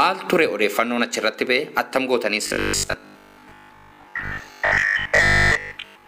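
From 2.43 s to the end at 6.07 s, the sound turns into a rigid, metallic buzz: robotic sound from repeated short buffers. The likely cause is new audio arriving too seldom, so each 20 ms stretch is replayed in place of the missing material for most of that span, imposing a 50 Hz buzz. A spectrogram would show evenly spaced harmonics 50 Hz apart with vertical striations every 20 ms, and the waveform would show identical 20 ms segments repeating.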